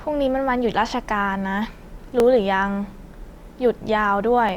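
From 1.06 s to 4.49 s the speech carries about four brief clicks, evenly spaced roughly every 1.14 s. These are clock drift buffer slips, likely from two devices running on independent clocks that disagree by around 500 ppm, so a few dozen samples are periodically dropped or repeated. On a waveform each slip shows as a small discontinuity in the signal, and on a spectrogram as a thin vertical broadband line recurring at that steady interval.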